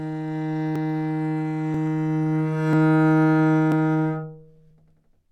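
A chunked recorder or processor likely drops a sliver of audio each time it closes one block and opens the next, with blocks about 1 s long. That is audio missing between chunks: roughly 10 ms vanishes and the two sides butt together with no gap. In this everyday sound it gives tiny skips at 0.76, 1.74, 2.73, 3.72 and 4.71 s, a regular stutter about once a second where the sound jumps slightly forward.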